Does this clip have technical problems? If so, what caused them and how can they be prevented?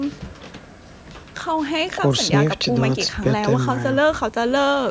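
No, there's nothing wrong here, just speech that's been through ordinary call microphone processing, which trims the deepest bass and leaves nothing above about 8 kHz, exactly as that kind of path is meant to.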